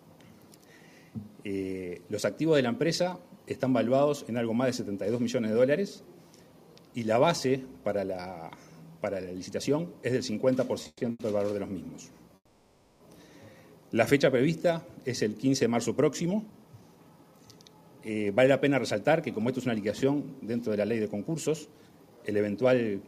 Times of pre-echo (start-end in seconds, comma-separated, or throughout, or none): none